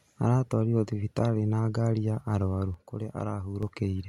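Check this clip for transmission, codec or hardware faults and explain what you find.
One fault is audible in this speech. From 2.74 to 3.63 s the level abruptly falls by about 6 dB and then snaps back. This is likely one channel drops out: losing one stereo side halves the summed mono signal, and anything present only in that side vanishes.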